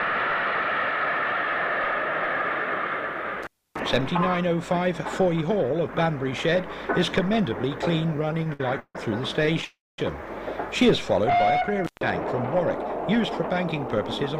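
At 3.43 to 3.80 s the sound drops out with crackle on both edges, leaving about 0.29 s of faint hiss: an intermittent contact, where a loose cable or plug briefly opened the line. From 8.13 to 8.96 s the audio drags and stutters through twelve short holds, the longest 151 ms, together filling 313 ms, with nothing actually lost. A milder burst follows from 9.37 to 9.64 s, with six holds of no more than 20 ms. These are repeated stalls (stutter): packets kept arriving late, so the jitter buffer repeatedly emptied and the receiver stretched the last sound each time. Right after, from 9.65 to 9.99 s, the sound hangs and fades, with about 200 ms of silence before it resumes where it stopped. This is a call audio freeze, likely from packets held up in transit, adding a 335 ms gap while losing nothing. A second intermittent contact at 11.85 to 12.01 s cuts out for about 0.15 s, again with crackle at the edges.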